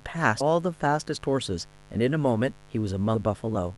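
A speech recording with mains buzz underneath the whole thing, a raspy 50 Hz hum and its harmonics sitting around 30 dB below the speech, likely from a dimmer or poor shielding. There are also compressed frames skipped at 0.40 s and 3.14 s, where the decoder drops roughly 100 ms and then roughly 150 ms of audio. The 23.2 ms frame steps fit 1024-sample frames at 44.1 kHz.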